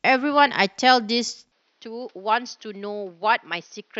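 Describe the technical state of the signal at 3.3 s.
At 3.3 s the speech is dull and boxy, with nothing above 6.3 kHz, about 5 dB quieter and over a new, faint noise floor, from 1.52 s to the end. This is likely an input switched to a poorer device. The tone, level and background noise all change at once with no gap, unlike a plain low-pass filter or codec bandwidth drop, which would narrow the sound alone.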